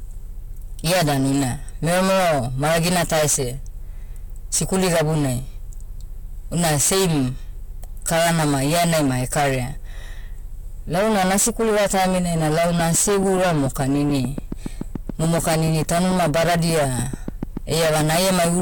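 From the first second to the last, the speech suffers hard clipping. The signal is driven about 25 dB past what the chain can pass, so roughly a third of samples are cut flat. Unlike distortion that comes and goes on peaks, it is a constant harsh fuzz on every loud sound.

From 12.80 s, right after "nasikuliva taiminai na", a train of clicks runs to 18.61 s. About forty near-identical pops arrive at a steady 6.9 per second, standing somewhat above the speech. They are likely caused by interference or a faulty connection. Their even spacing separates them from random crackle.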